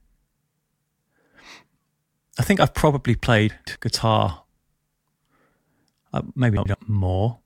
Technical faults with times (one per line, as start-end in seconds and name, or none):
3.50-3.75 chunks out of order
6.57-6.74 chunks out of order